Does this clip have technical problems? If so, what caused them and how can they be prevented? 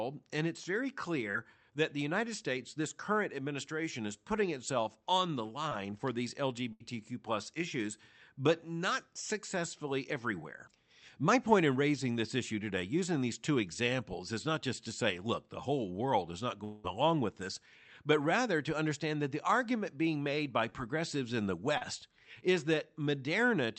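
Yes. Short concealed packet loss occurs at 1.31–1.35 s, 5.69–5.73 s (between "putting itself on the" and "for these"), 20.70–20.74 s (after "argument being made by", before "in the") and 21.78–21.83 s (after "in the"). Each time, about 20 to 40 ms of the Opus stream arrived too late, and the decoder bridged the gap by extending the preceding sound. This leaves a quick smear or wobble before the real audio resumes. Prevention: a slightly deeper jitter buffer and Opus in-band FEC would recover most of these single lost packets.

A burst of packet loss at 6.73–6.82 s removes about 80 ms. Several consecutive packets went missing, so the concealment held the last sound as a buzz or hiss that faded while the gap lasted. Speech then picks up slightly further on, with the lost stretch gone. Prevention: FEC or redundant encoding (RED) tuned for consecutive losses, plus a connection with less congestion.

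A long network dropout at 16.64–16.86 s takes out about 200 ms. No real silence occurs. Instead, the concealment stretches the last sound into a fading buzz or hiss for the whole gap, and the audio comes back later with that section missing. This was likely caused by a brief stall in the network path. Prevention: use a more stable connection, such as a wired link instead of congested Wi‑Fi, and monitor for network stalls.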